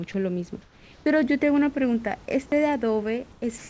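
At 0.12 to 0.14 s, a brief slice of speech, about 10 ms of it, vanishes into a flat hiss lasting 20 ms. This is sound dropped by the voice detector: the sender likely judged the sound to be background and stopped transmitting, so the receiver substituted synthetic noise.

From 0.62 to 1.06 s, again from 3.32 to 3.42 s, and finally from 3.58 s to the end, the room background, roughly 26 to 30 dB below the speech, turns smooth and textureless. It is about 2 dB quieter in the first two stretches and about 1 dB louder in the last. This is comfort noise in place of the background. With no speech detected, the sender likely paused transmission, and the receiver generated steady noise shaped to approximate the real ambience. Through the G.722 path, which carries nothing above 8 kHz, that synthetic fill is a smoother wash than the genuine room tone around it.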